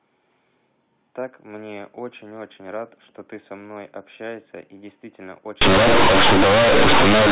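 Speech carried over telephone-band G.711 coding, with nothing above 4 kHz. From 5.61 s to the end at 7.32 s, the sound becomes companded audio read as linear: mu-law bytes are played straight as 8-bit samples without expansion. Every sign change throws the waveform across roughly half its range, so the audio turns very loud and buzzy. Unlike ordinary clipping or overload, quiet passages and pauses blow up as much as the peaks, filling the gaps with heavy noise.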